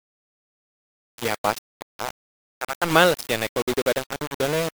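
The speech was most likely reduced to about 5 bits and rounded with no dither, a case of low bit depth without dither, present for the whole clip. With so few levels, the rounding error tracks the waveform instead of spreading as steady hiss, so the distortion sits only around ten decibels below the speech. It sounds harsh and grainy, changing texture with the speech, and quieter passages turn gritty or sputter as they fall between steps.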